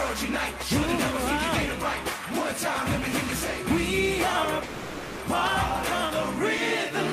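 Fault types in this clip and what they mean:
Call audio freeze: from 4.63 to 5.22 s the last sound hangs as a fading buzz, likely a starved jitter buffer, then resumes intact, about 0.56 s late.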